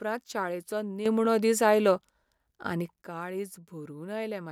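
A sudden gain jump runs from 1.06 s to 3.02 s in this speech clip: the level steps up by about 9 dB with no ramp, speech and background noise rising together, most likely a digital gain change applied from one sample to the next, then dropping back.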